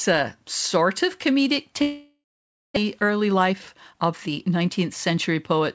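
At 1.82 s, after "a sort of comedic", the sound smears into a fading buzz, then silence until 2.78 s. This is likely a long network dropout, losing about 0.6 s. From 3.03 s to 5.61 s, a jitter buffer speed-up trims short pitch-period pieces. Speech runs 11% faster at unchanged pitch, shedding roughly 0.3 s of delay.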